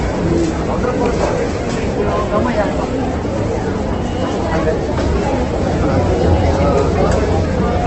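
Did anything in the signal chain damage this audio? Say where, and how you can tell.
Yes, at the codec stage, and the damage runs through the whole clip. The sound is rough and grainy with nothing above 8.1 kHz; a spectrogram shows a hard ceiling there and noisy, smeared bands below. This is likely Opus compression, heavily squeezed at a low bitrate.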